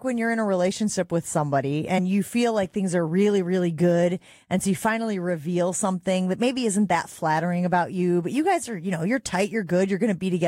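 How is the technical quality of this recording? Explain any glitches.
One glitch is audible. At 1.97 to 1.99 s, between "a relationship with somebody" and "you feel like things", compressed frames are skipped: about two frames, roughly 50 ms of audio, never play, so the speech jumps ahead at that point.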